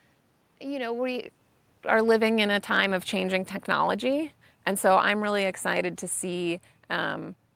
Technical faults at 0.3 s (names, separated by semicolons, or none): none